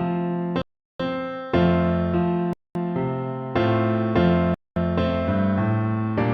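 The audio cuts abruptly to silence three times, at 0.62 to 1.0 s, 2.53 to 2.75 s and 4.54 to 4.76 s, for about 0.38, 0.22 and 0.22 s, then resumes. These are likely Bluetooth stalls, where delayed packets let the headphones' buffer run empty.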